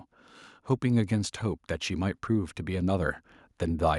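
Automatic gain rising: from 0.8 s to 3.95 s the gain control lifts a too-quiet speech input by about 5 dB, so voice and background swell together gradually.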